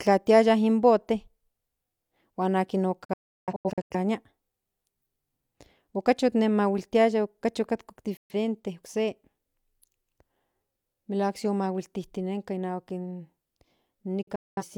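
Right after "huan akin", a digital broadcast dropout runs from 3.05 to 3.96 s: failed frames mute the receiver in several short holes totalling about 0.6 s, the longest 0.34 s. Similar dropouts follow at 8.17 to 8.34 s and, scattered, at 14.23 to 14.63 s. Each edge fades in 3 ms, so the sound cuts abruptly. The waveform shows flat-line gaps, and the spectrogram shows blank vertical slots whose widths fit multiples of a roughly 43 ms frame.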